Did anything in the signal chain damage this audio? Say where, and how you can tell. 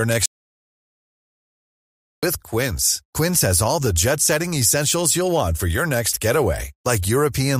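Yes. An audio dropout to silence runs from 0.26 to 2.23 s, likely from the input device or link dropping out. Speech cuts off mid-flow, and the two-second gap has no room tone, unlike a gate's gradual fade.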